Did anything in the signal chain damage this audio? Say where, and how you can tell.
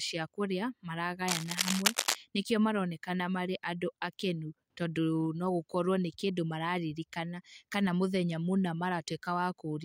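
Yes, in the analogue wiring. From 1.28 to 2.15 s, just before "nĩkĩo maronekana marĩ andũ", dense, uneven scratching and rustling sits over the speech at roughly the speech's own level. This is cable scratch noise, likely from a worn cable or connector shifting, its contact resistance fluctuating rapidly.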